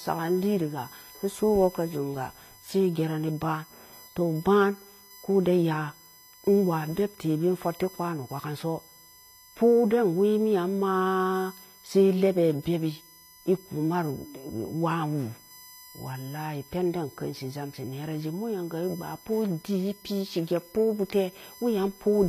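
Right from the start there's a USB whine running under the speech, a fixed 1 kHz tone built on bus frame current, loudest at its 5 kHz harmonic, about 25 dB down. Throughout, the treble sounds gritty and lispy with nothing above 14.9 kHz, likely HE-AAC compression rebuilding the highs by band replication, which fits a low bitrate around 24 kbps.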